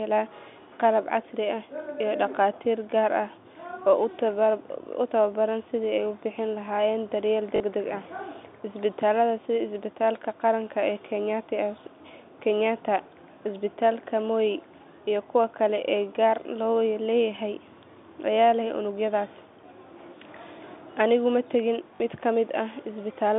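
At 7.56 s and 21.96 s, just after "ma tegin", packet loss with last packet repeated loops 40 ms of audio, consistent with two 20 ms packets, producing a short robotic stutter.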